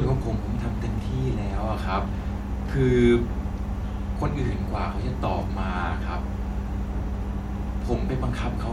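A speech recording carries mains hum from start to finish. It is a steady low tone at 60 Hz with a few low harmonics, nearly as loud as the speech itself. A ground loop or a nearby transformer is coupling the power line into the signal.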